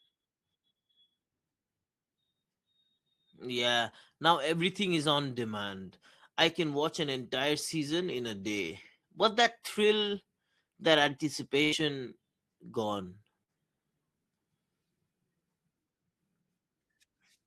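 At 11.63 s a burst of packet loss begins, lasting until 11.75 s. About 80 ms never arrived. The receiver stretched the last sound into a fading buzz or hiss, then skipped ahead. At 13.43 s there is a short concealed packet loss. Around 40 ms went missing and was patched with a brief smear before the real audio blended back.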